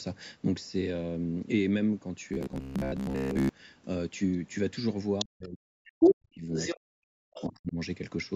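From 2.29 to 3.49 s the speech takes on robotic sound from repeated short buffers. A steady buzz near 67 Hz rides over it. That rate fits a repeat of about 15 ms. New audio likely arrived too seldom, so most of this stretch is recycled fragments. The voice turns metallic but still roughly follows the phrasing.

At 5.19 to 5.25 s, the other side's voice leaks through, about 5 dB below the talker. Loudspeaker sound likely reached the microphone and the echo canceller left some behind. It returns at 5.84 to 6.14 s, now about 10 dB above the talker. It comes back at 6.53 to 6.80 s, about 5 dB below, and again at 7.34 to 7.52 s, about 15 dB below.

Overlapping these, the speech is suppressed in double talk, from 5.23 to 6.49 s, 6.81 to 7.29 s and 7.48 to 7.78 s. Both sides were speaking. The canceller likely could not separate them and pulled the talker down by as much as about 40 dB. The voice dips hard and drops out in pieces.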